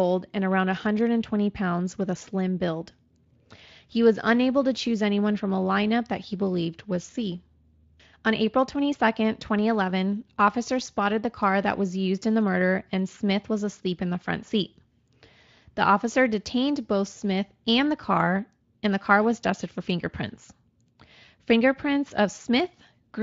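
The speech has no audible technical faults; it passes through a Speex codec at what sounds like a fairly high setting, which leaves only a light coding mark on the sound.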